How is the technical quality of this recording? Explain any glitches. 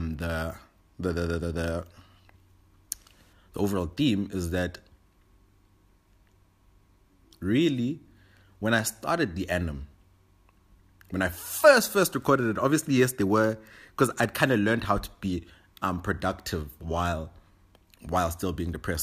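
Nothing in the recording stands out as a glitch; it's all smooth sailing with no technical faults to explain.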